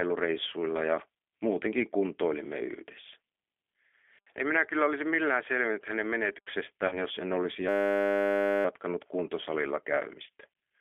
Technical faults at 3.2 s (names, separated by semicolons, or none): G.729 codec